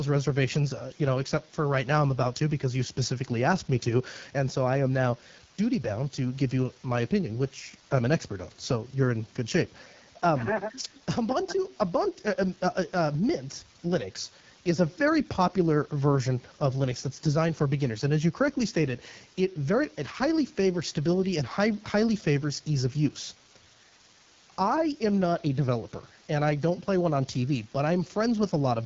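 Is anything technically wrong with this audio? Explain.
Yes. The speech has been through the AMR wideband (HD Voice) codec for the whole clip. The codec models speech up to 6.4 kHz with a pulse-excited vocal tract filter and fills the band above that with shaped noise. Nothing is present above 7.5 kHz. The damage is plainly audible. The speech sounds rough and raspy. That roughness fits one of the codec's lowest modes, around 8.85 kbit/s.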